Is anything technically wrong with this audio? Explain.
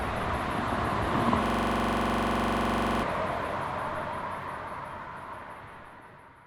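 Yes. From 1.46 to 3.03 s there is a system hang loop. The system froze while the hardware kept replaying one ring buffer. A 42.67 ms slice repeats 37 times, which fits a 2048-sample buffer. It sounds like a rapid, rattling stutter at 23.4 Hz.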